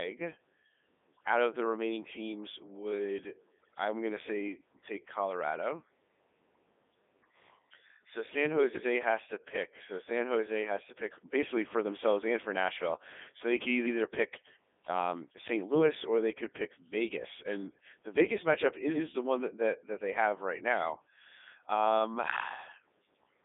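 Codec 2 vocoder, throughout the clip: the speech has been reduced to pitch, voicing, energy and a coarse spectral envelope, then rebuilt from sine waves at the decoder, so the original waveform is gone. The damage is heavy. The speech sounds robotic and buzzy, which fits the 3.2 kbit/s mode. The band sits between roughly 250 Hz and 3.6 kHz, with nothing above 3.8 kHz, giving a thin, radio-like tone.

Overlapping chunks, at 13.86 to 13.97 s: at this join a new processing chunk begins before the previous one has finished, so about 100 ms of the audio plays twice in a row. It is heard as a brief stutter at the seam, as if the speech jumps back a fraction and repeats itself. The placement of the join fits the audio being handled in 5-second chunks.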